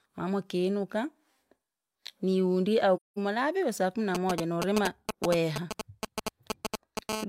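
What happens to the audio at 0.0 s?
Nothing goes wrong at 0.0 s; the speech starts cleanly, with no dropout, click or distortion at that point.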